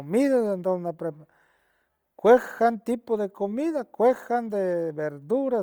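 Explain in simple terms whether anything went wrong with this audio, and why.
Throughout, the speech was likely squeezed hard by Bluetooth LC3 compression, which replaces discarded detail with noise, giving the voice a breathy, grainy edge.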